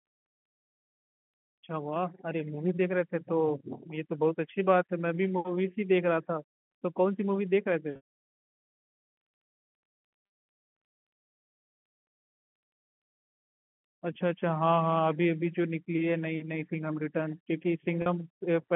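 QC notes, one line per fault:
7.96–8.03 s, 10.26–10.36 s, 18.02–18.06 s, packet loss with pitch repetition: packets went missing (about 180 ms near 8.0 s, longest run 140 ms; 100 ms; 40 ms) and the receiver looped the last pitch period, giving a brief buzzy hold that fades before the sound cross-fades back.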